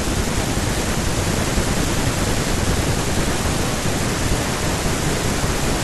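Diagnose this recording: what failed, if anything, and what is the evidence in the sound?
Nothing failed: no stage from capture through to playback leaves any audible mark on the speech.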